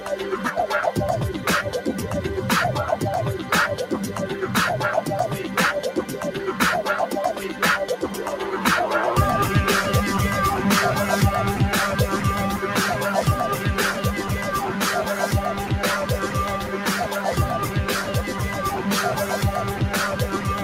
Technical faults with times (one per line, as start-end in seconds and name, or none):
16.61-16.86 sound cut by the noise suppressor